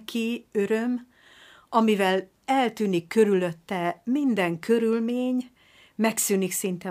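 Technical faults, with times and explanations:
No technical faults are present in this clip.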